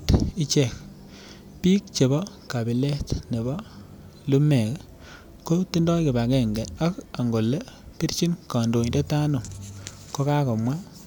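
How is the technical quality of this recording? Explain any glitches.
No glitches or technical faults can be heard here.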